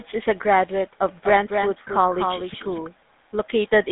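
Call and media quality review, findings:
GSM full-rate codec, whole clip: buzzy, gravelly roughness on the speech, clearly audible. Band sits at about 150 Hz to 3.7 kHz, nothing on top. Sounds like the 13 kbps full-rate coder: vocal-tract model fed a sparse, regularly spaced pulse excitation, so the fine detail gets coarsened into that grainy buzz.

Lost GSM frames, 1.88 to 1.91 s: short metallic ring where the sound briefly freezes. Fits a single dropped 20 ms frame. The decoder re-played the last good frame's parameters to cover the gap, which gives that held, rough tone.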